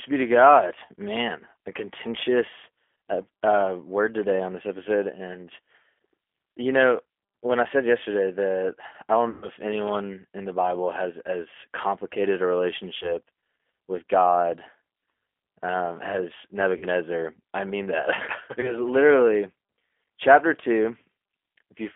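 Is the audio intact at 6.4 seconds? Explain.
No. At 6.4 seconds, as through the whole clip, the speech sounds thin, slightly rough and buzzy, with a synthetic edge and nothing bright above about 3.4 kHz. That is G.729 codec damage, here the G.729A variant. The codec rebuilds each short frame from a vocal tract filter, a pitch predictor and a few pulses rather than the real waveform, in a way that fits an 8 kbit/s telephone line.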